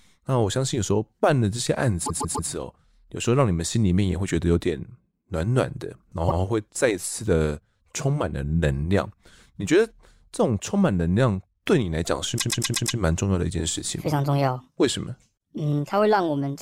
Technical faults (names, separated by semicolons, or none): repeated frames